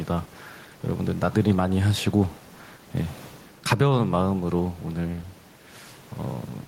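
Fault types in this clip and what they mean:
Gain pumping: throughout the speech, the room noise, about 30 dB below the talking, swells in each pause and sinks under each loud sound, a swing of around 5 dB. The likely cause is input gain set too high, with a fast limiter pulling it down.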